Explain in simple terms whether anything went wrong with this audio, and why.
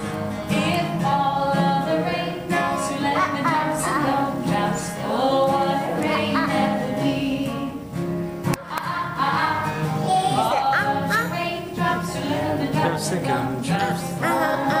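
Nothing went wrong with this recording: the signal holds steady throughout, with no gaps, jumps in level, or other technical faults to be heard.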